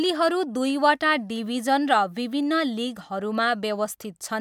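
Nothing goes wrong anywhere in this bit of speech, so there's no fault to point to at any moment.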